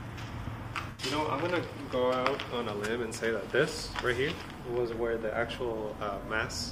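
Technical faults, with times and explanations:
0.90–1.02 s and 6.21–6.25 s, AAC frame loss with concealment: brief smeared, noisy patches where the decoder patched lost frames from the last good spectrum. The first gap, about 85 ms, fits four frames. The second fits one.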